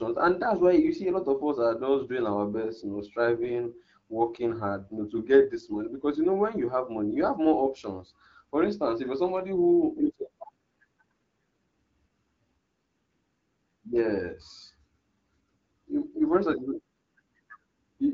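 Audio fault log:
3.30–5.01 s and 9.39–11.00 s, AMR rate drop: Twice, the link told the AMR-WB encoder to code speech more coarsely and spend the freed bits on error protection. The roughness fits a step from 12.65 kbit/s down to 8.85 kbit/s. The band stays the same and the sound never cuts out, but during each window of about 1.7 s and 1.6 s the speech turns rougher and more synthetic. It returns to the lightly coded wideband quality once the higher rate resumes.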